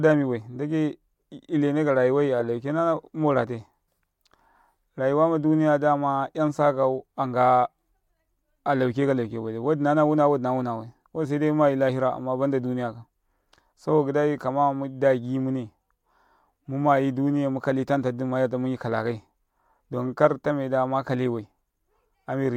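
No technical faults are audible anywhere in the speech recording.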